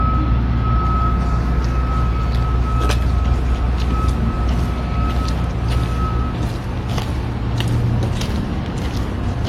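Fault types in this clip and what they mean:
No technical fault can be heard anywhere in this recording of sounds. Nothing in it calls for a fault line.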